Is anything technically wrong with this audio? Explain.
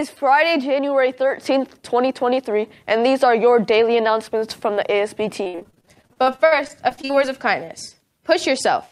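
Yes, there are two faults, back to back.

From 5.43 to 7.15 s there is repeated packet loss with a robotic sound. More than twenty short holes, the longest about 61 ms, are each patched by stretching the preceding sound, so roughly 30% of that stretch is synthetic fill. Unlike a single dropout, the holes come in a rapid chain, giving a choppy, robotic texture with pieces missing.

From 7.16 to 8.07 s a jitter buffer slow-down follows. The receiver repeats short pitch periods to rebuild its reserve, adding about 47 ms and running the audio at 96% speed. Unlike a tape or clock slowdown, the pitch stays put. Sounds are simply drawn out.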